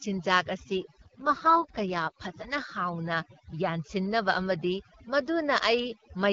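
A speech recording, carried over an HD Voice link whose AMR-WB coding sounds light and consistent with 12.65 kbit/s. Overdone noise removal runs throughout. The background drops and breaks up into twinkling specks. Quieter parts of the voice are cut away too. From 1.00 to 2.21 s there is an AMR rate drop. The band stays steady, with no gap, but the voice turns rough and synthetic. That fits the codec stepping down to 6.6 kbit/s on a weak radio link, then recovering.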